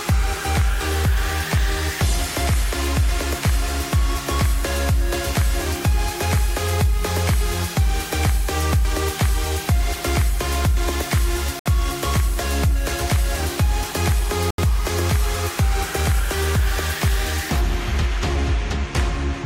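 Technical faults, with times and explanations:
11.59–11.66 s and 14.51–14.58 s, Bluetooth stall: radio interference likely delayed the wireless packets, so the receiver's buffer emptied and playback halted, leaving gaps of silence of 65 ms and 77 ms before the sound resumes once the retransmitted data arrives.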